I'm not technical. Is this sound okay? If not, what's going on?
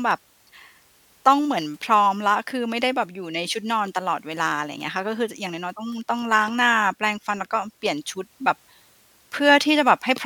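Yes, nothing in this recording stood out as a problem when I listened to it.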